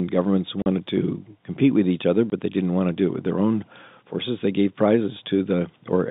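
At 0.62 to 0.66 s, just before "to compete with each", and again at 2.30 to 2.32 s, between "compete with each other" and "they didn't want to", packet loss filled with silence cuts 40 ms and 20 ms holes into the telephone-band speech. The edges are abrupt, and the lengths fit 20 ms packets.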